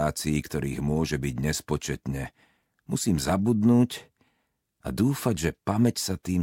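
No technical faults can be heard anywhere in this clip. Nothing in the audio points to a problem with how it was captured or delivered.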